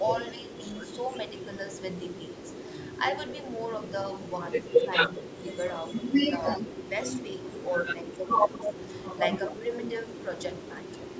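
Between 0.2 and 1.5 s the speech dips in pieces, losing about 15 dB at its deepest over roughly 0.4 s in total. This is speech suppressed in double talk, likely an echo canceller that, with both sides talking at once, turned the near talker down along with the loudspeaker echo. It returns from 4.79 to 5.43 s, shallower at about 10 dB and roughly 0.3 s in all. On a waveform the envelope shows sudden notches; on a spectrogram the upper bands thin out or blank in patches.

From 5.91 to 6.57 s a delayed copy of the speech trails 263 ms behind, about 15 dB under the main speech. This is an echo leak, likely from a far-end loudspeaker whose canceller let part of the microphone pickup return. It recurs at 8.52 to 8.74 s at 240 ms, roughly as loud as the speech, and at 9.48 to 10.14 s at 240 ms, about 10 dB down. A spectrogram shows each syllable's pattern repeated, shifted right, with the content still stopping at 8 kHz as the call processing shapes it.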